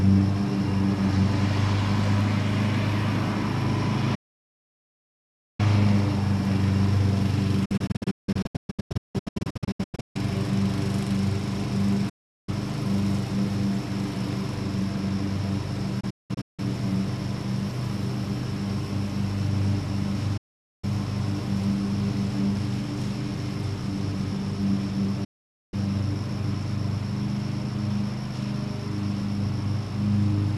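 Digital broadcast dropouts occur six times, as the receiver loses the signal or rejects corrupted frames and mutes within about 8 ms: solid holes at 4.15–5.60 s, 12.09–12.49 s, 20.37–20.84 s and 25.24–25.74 s, and broken clusters of short gaps at 7.65–10.16 s and 16.00–16.59 s. The missing sound never returns.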